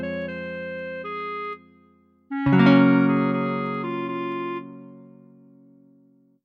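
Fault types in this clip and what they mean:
Clock slip clicks: a faint, regular ticking, almost a soft rattle, runs from 0.14 to 6.37 s, one tick about every 70 ms. The likely cause is two unsynchronised clocks a few hundred ppm apart, dropping or repeating one sample whenever their drift reaches a whole sample.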